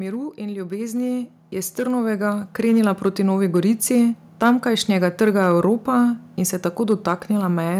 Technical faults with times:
0.00-7.80 hard clipping
0.36-3.91 automatic gain rising

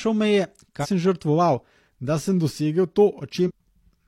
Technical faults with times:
0.79-0.87 damaged data in a compressed stream
3.44-3.51 damaged data in a compressed stream

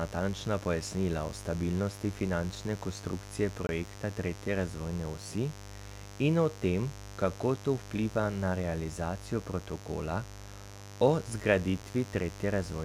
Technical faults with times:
0.00-12.84 mains buzz
3.67-3.69 block of digital silence

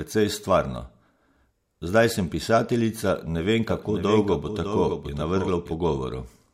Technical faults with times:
3.69-5.73 doubled audio track

